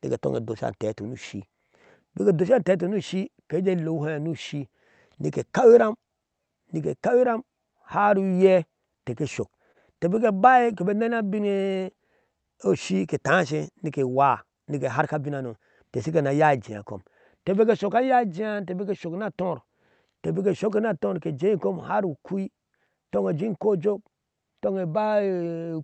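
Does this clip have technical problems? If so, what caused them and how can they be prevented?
Yes. Between 9.63 and 10.77 s the speech shows repeated stalls (stutter). Packets kept arriving later than they were due, so the jitter buffer emptied about nine times, and each time the receiver stretched out the last sound to cover the gap, the longest being 28 ms. Around 103 ms was filled in this way and nothing was lost. On a spectrogram the gaps appear as short, smeared, repeated slices where the harmonics freeze in place. A deeper jitter buffer, or a steadier network path with less queuing, would prevent this.

From 11.19 to 12.57 s there is a jitter buffer slow-down. The buffer was running short, so the receiver repeated individual pitch periods to build up a reserve. This added 135 ms and played the speech at 91% speed with no change in pitch, so sounds are drawn out. On a waveform, voiced segments look lengthened, with identical cycles repeated. 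Keeping packet delivery stable, or letting the buffer adapt its target more gently, avoids these stretches.

From 14.48 to 15.58 s a jitter buffer speed-up runs the speech at 110% speed, again with the pitch unchanged, so it sounds briefly hurried. The buffer held more audio than it aims for, so the receiver removed short pitch-period pieces, roughly a tenth of a second in total. A spectrogram shows syllables slightly compressed in time while the harmonic spacing stays the same. Reducing bursty delivery, for example with traffic shaping or prioritising the audio, prevents this.

Throughout the clip, the call codec path cuts off the spectrum above 8 kHz, and a spectrogram shows this as a flat upper edge.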